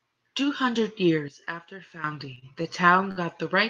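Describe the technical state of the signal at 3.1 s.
At 3.11 s a short stall from a late packet begins, running to about 3.27 s. The jitter buffer ran dry, so the last sound is stretched for about 52 ms until the packet arrives. Unlike a loss, nothing is skipped: the speech resumes exactly where it paused, only held slightly long.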